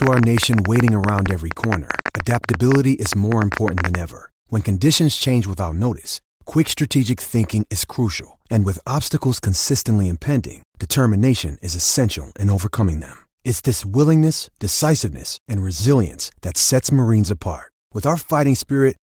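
Something, likely electrical interference or a faulty connection, injects a train of clicks from 0.02 to 3.96 s: about 50 similar pulses at an uneven 12.7 per second, peaking roughly 15 dB above the speech. They are heard as hard, irregular ticking over the speech, and the Opus voice compression beneath them adds only slight coding softness.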